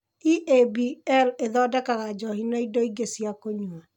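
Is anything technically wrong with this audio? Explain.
No, nothing technically wrong can be heard in this speech clip. It shows no audible faults.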